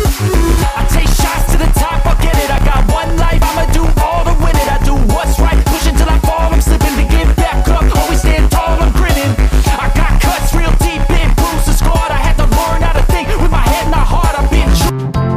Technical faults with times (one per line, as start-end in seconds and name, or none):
2.58 dropped buffer (overrun)
3.42 dropped buffer (overrun)
4.64 dropped buffer (overrun)